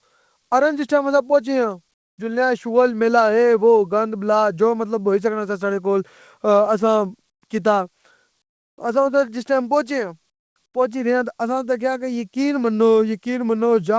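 Comfort noise in place of the background at 1.94–2.18, 7.30–7.42, 8.42–8.78, 10.30–10.56 and 10.66–10.74 s: short pauses go flat, featureless and about 10–20 dB quieter, likely discontinuous transmission filling silence with synthetic noise.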